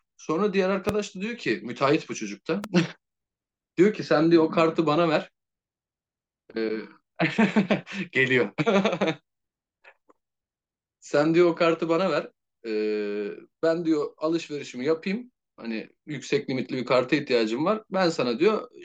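At 0.89–0.92 s and again at 2.64–2.66 s a loud pop cuts through the speech, the first well above it and the second somewhat less so, each likely a voltage spike from a plug, switch or static, with the speech continuing beneath. Both appear as narrow vertical spikes on the waveform and full-height broadband stripes on a spectrogram.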